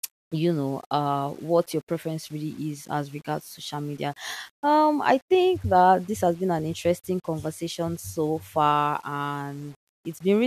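From the first second to the end, the speech carries a grainy, gritty edge that tracks the voice itself, rising and falling with each syllable rather than sitting underneath as a steady hiss. Quiet tails and soft consonants get rough and sputtery, with the error roughly 30 dB below the speech. That pattern is the signature of low bit depth without dither, most likely rounding to around 8 bits with no noise added to smooth the steps.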